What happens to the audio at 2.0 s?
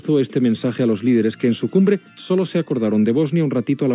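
Nothing goes wrong at 2.0 s; the audio plays through that moment intact, with no dropout, glitch or distortion.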